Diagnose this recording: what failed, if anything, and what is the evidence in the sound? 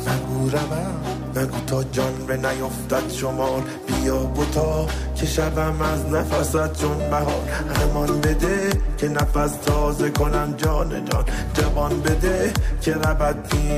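Nothing failed: at no stage from capture to playback is there any technical fault to point to in this recording's signal.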